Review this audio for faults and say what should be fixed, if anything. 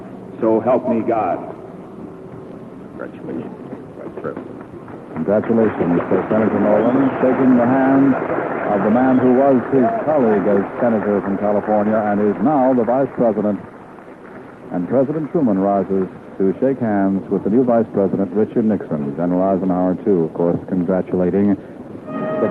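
No faults found; nothing needs fixing.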